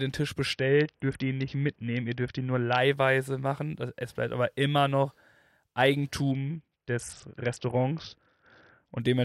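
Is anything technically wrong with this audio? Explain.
Yes. A Bluetooth SBC bit pool drop occurs twice, from 0.53 to 2.78 s and from 6.32 to 9.00 s. The link seems congested, so the encoder starves the high sub-bands. Speech turns dull and gritty, which fits a fall to roughly 55 kbps.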